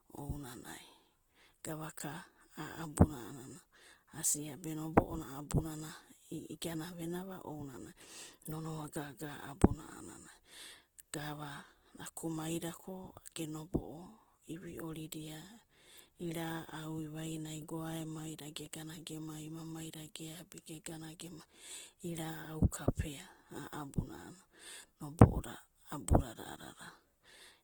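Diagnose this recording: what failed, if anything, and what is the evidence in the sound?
The codec stage failed. Throughout the speech, tones turn rough and grainy, yet energy reaches about 20.1 kHz with little swirl. This is likely Opus compression in CELT mode, filling starved bands with noise or folded copies, which fits roughly 16 kbps.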